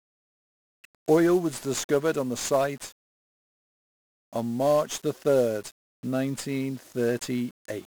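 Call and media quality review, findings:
1-bit DFPWM compression, throughout, heavy. The speech path is encoded at one bit per sample, which fits a DFPWM stream around 48 kbps. Each bit nudges an adaptive level up or down, so the coarse steps leave dense broadband quantisation noise. Speech is fuzzy and crackly, with the treble buried under hiss.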